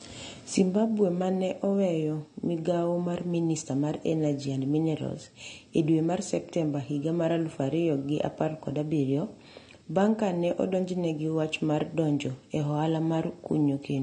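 From start to finish the speech sounds dull and smeared, with a watery, warbling shimmer on sustained vowels and a fizzy, swirling texture on sibilants. This is most likely AAC compression, AAC-LC at a low bitrate that fits roughly 32 kbps. The encoder discards quiet spectral detail, leaving gaps and patching bands with noise. A plain low-pass filter would only muffle; here the missing top end comes with that moving, metallic swirl.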